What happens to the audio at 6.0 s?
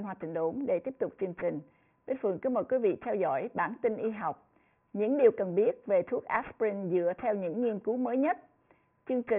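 Aliasing runs throughout, including at 6.0 s: content above 3 kHz folds back as gritty, unrelated tones, fitting a 6 kHz rate, unlike plain low-pass muffling.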